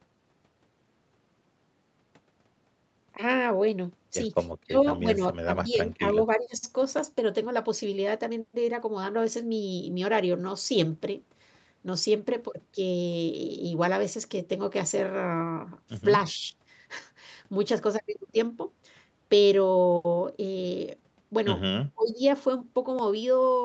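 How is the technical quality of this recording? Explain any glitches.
The recording has two recurring faults: a regular click from buffer slips and several short dips in the speech level. The sound carries no content above 8 kHz, consistent with the Opus call path and the call's microphone processing.

Clock drift buffer slips: Roughly every 3.99 s from 2.98 s to about 22.99 s, about seven times in all, a brief click or pop cuts into the speech. The likely cause is two devices running on separate clocks that disagree by a few hundred parts per million, around 700. The buffer between them gradually overfills or runs dry until a block of about 150 samples is dropped or repeated. On a waveform each slip is a small discontinuity. On a spectrogram it appears as a thin vertical broadband line at evenly spaced intervals.

Speech suppressed in double talk: The speech level drops at 4.65–4.75 s (by about 30 dB), 5.02–5.23 s (about 10 dB), 5.44–6.19 s (about 15 dB), 6.36–6.62 s (about 15 dB), 16.34–16.54 s (about 5 dB) and 21.94–22.21 s (about 25 dB). 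The likely cause is an echo canceller facing speech from both ends at once. Unable to separate the local talker from the loudspeaker echo, it pulls the whole signal down. The speech sounds choked or briefly gapped. On a waveform the envelope shows sudden notches. On a spectrogram the energy fades in patches, most deeply at 4.7 s and 22 s.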